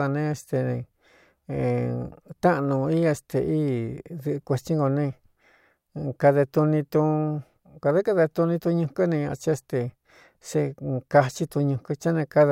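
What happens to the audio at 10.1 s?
Nothing goes wrong at 10.1 s; the speech there plays through intact.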